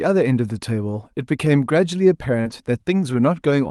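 At 2.41 s the speech hits a short concealed packet loss, lasting until 2.48 s. About 40 ms of audio arrived too late for the decoder. The receiver covered the hole with about 35 ms of invented sound, extending the last pitch or shaped noise. It then blended back into the real signal. The result is a brief smear or wobble. The passage also runs a little long, by roughly 10 ms.

Overlapping this, from 2.45 to 2.52 s, comes a lost packet rebuilt from error correction. The rebuilt stretch is 40 ms, which points to two lost packets. Each was recovered from a low-bitrate copy carried in the next packet. Opus played those copies, so there is no silence. These frames sound rougher and grainier than their surroundings. Above them sits the call's 12 kHz bandwidth at 40 kbps.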